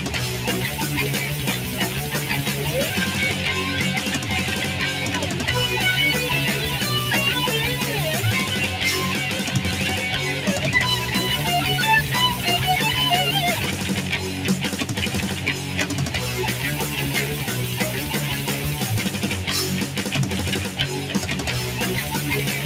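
Throughout the audio, a speech-oriented noise suppressor was left running on material it was not designed for, treating sustained tones, ambience and decay as noise. Attacks pass while held sound and tails are pulled down by about 5 dB, producing audible pumping and thinning.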